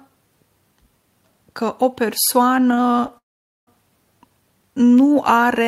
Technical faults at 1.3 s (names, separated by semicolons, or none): none